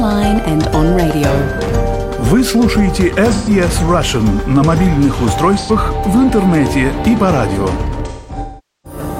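At 3.33 s there's a brief smeared, noisy patch lasting about 0.13 s, then a shorter one at 5.58 s of about 85 ms, which fit three and two lost frames. That's AAC frame loss with concealment: the decoder rebuilt the gaps from the last good spectrum. From 8.08 to 8.99 s the losses come scattered, the longest stretch around 0.4 s, so the sound decays toward silence before fading back.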